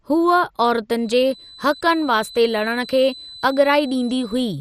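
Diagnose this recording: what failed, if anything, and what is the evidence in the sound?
Codec stage: the speech is dull throughout, with nothing above 15.1 kHz and a plainly audible gurgling, granular texture. This is most likely MP2 compression at a low rate, around 64 kbps. Layer II divides the spectrum into 32 equal sub-bands and shares a limited bit budget among them. When bits run short, the upper bands are dropped and the remaining ones are quantised coarsely, which produces the flickering, grainy distortion heard here.

Acoustic path, before the microphone: from 0.92 s to the end of the clip a steady, thin tone sits at 4 kHz, roughly 20 dB below the speech, swelling and fading slowly in level without growing into a howl. This is a feedback whistle, likely from a loudspeaker-to-microphone loop held just at the edge of instability. At that point one frequency keeps recirculating at a low level instead of building into a runaway howl.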